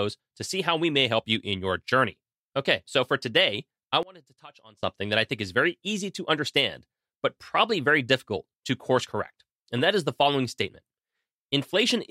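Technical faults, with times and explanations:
4.03–4.83 s, one channel inverted: after "so for today I" the speech drops by about 25 dB to a faint residue until "that I think is". The likely cause is reversed polarity in one channel, which cancels the centred voice in mono. The waveform collapses, and the spectrogram dims across all frequencies.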